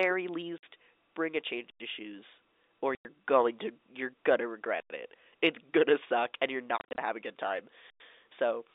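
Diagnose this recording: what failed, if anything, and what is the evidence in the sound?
The speech is chopped by dead holes with hard edges at 0.58 s (50 ms), from 2.95 to 3.05 s (100 ms), and between 6.78 and 6.98 s, where 140 ms of silence is scattered in short bursts no longer than 30 ms. This is packet loss filled with silence at the network stage. Every hole is a multiple of 10 ms, which points to 10 ms packets. The receiver played silence in place of each missing packet instead of concealing it.

A second fault sounds different. Clean 100 ms silences arrive every 3.1 s: at 1.70 s between "bring a change" and "of shoes or", at 4.80 s after "going to you're gonna", and at 7.90 s after "have a good time". Nothing is missing on either side of these holes, only delayed. This is a gap between chunks at the storage or playback stage. Each 3 s chunk likely starts late or carries padding, so the joins open into silence. 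These gaps sit over a G.711 A-law telephone band of about 300 to 3,700 Hz.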